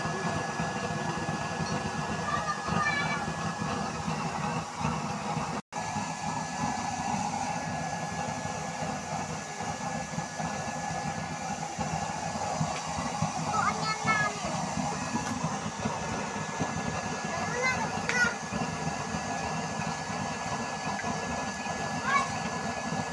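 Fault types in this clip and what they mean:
No faults can be heard.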